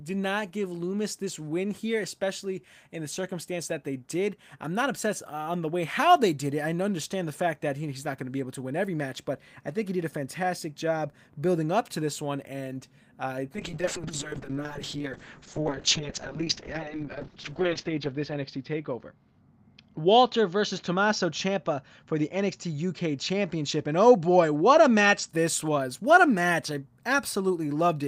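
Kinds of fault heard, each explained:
Call bitrate drop: from 13.57 s to 25.35 s the encoder gets starved, so the speech goes coarse and watery and the top end shrinks from 20 kHz to 8 kHz. That fits a fall from 32 kbps to roughly 6 kbps, worst for 3.79 s.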